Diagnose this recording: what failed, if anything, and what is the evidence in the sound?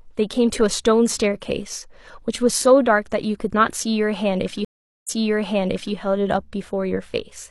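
A stream reconnect failed at the network stage. At 4.65 s the speech drops out for about 415 ms. When it returns, it repeats material from roughly 0.88 s earlier, so the listener hears a stretch twice. The disturbance settles by 5.94 s. The connection broke, and the player went silent while it reconnected. The server then resent a burst of buffered audio, and a fresh decoder started mid-stream, which is why the audio jumps backwards.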